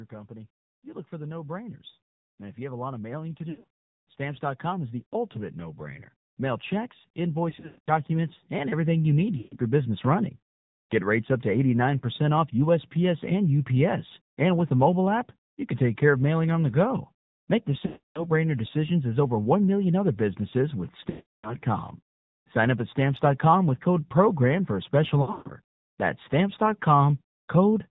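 Throughout the speech, the AMR narrowband mobile codec at 7.4 kbps gives a plainly buzzy, synthetic quality, because a handful of pulses per subframe drive a vocal-tract model. A spectrogram shows nothing above 4 kHz and coarse, smeared harmonics.

Lost AMR speech frames occur at 3.50–3.68 s, 7.50–7.89 s, 9.38–9.57 s, 17.86–18.27 s (before "brainer decisions as over"), 21.10–21.56 s (after "million other businesses with") and 25.22–25.53 s (after "for a special"), totalling 140 to 340 ms each. The decoder reuses the last pitch and envelope at falling gain, so sound drags, warbles and fades. On a waveform this is a shrinking envelope, and on a spectrogram the harmonics freeze.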